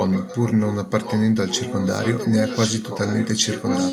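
A delayed copy of the speech trails behind the talker three times: from 0.07 to 0.77 s, 1.02 to 1.86 s, and 2.04 s to the end. It's an echo leak, lagging about 1.1 s and sitting roughly 15 dB under the speech, rising to about 10 dB down in the middle stretch. Likely the far end is on a loudspeaker and its echo canceller let some of the mic pickup slip back through.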